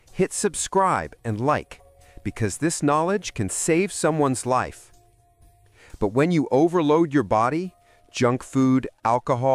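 No technical faults can be heard anywhere in the clip.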